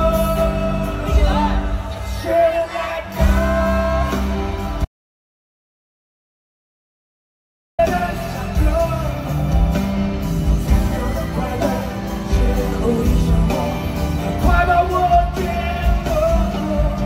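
The input link likely dropped from 4.85 to 7.79 s, so silence was written: an audio dropout to silence, nearly 2.94 s of dead air cutting off mid-flow.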